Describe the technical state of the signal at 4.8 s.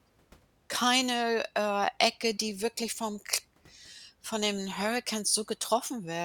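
The speech at 4.8 s comes through intact, with no audible fault at that moment.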